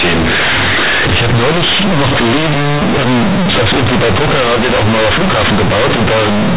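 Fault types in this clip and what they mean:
Companded audio read as linear: A-law G.711 bytes are played as plain linear 8-bit samples without expansion. Each sign change swings the output across about half its range, so quiet passages sound as loud as the speech, giving harsh buzzy distortion and heavy noise in pauses.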